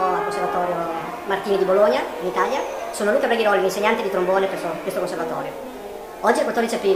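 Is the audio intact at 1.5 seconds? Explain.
No. At 1.5 seconds, as throughout the clip, there is a wrong sample rate fault. The sound runs about 1.38 times too fast and sits about 5.5 semitones high, which fits 32 kHz material played back at 44.1 kHz without conversion.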